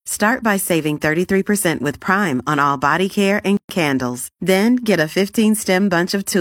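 At 3.57 s the speech breaks for about 123 ms, until 3.69 s: a gap at a join of encoded pieces, where encoder start-up silence and last-frame padding were left in. Unlike a dropout, nothing is lost; speech resumes exactly where it stopped, with smeared edges.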